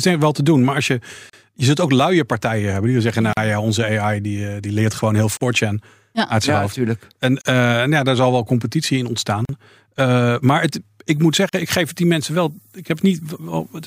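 Gaps at a join of encoded pieces break this speech clip at 1.30, 3.33, 5.37, 7.41, 9.45 and 11.49 s, every 2 s. Each lasts about 35 to 40 ms, including the one between "partijen hebben die zeggen" and "ja onze" and the one after "zal wel competitie in". Each piece was encoded on its own, and the encoder's leading delay and last-frame padding were left in when the pieces were joined. The sound then resumes where it stopped. Low bit depth with noise shaping runs from 11.1 s, right after "maar het", to the end. The signal is reduced to about 9 bits. The rounding error is pushed up in frequency, so it becomes a steady, thin hiss around 30 dB below the signal that rises strongly toward the top of the band.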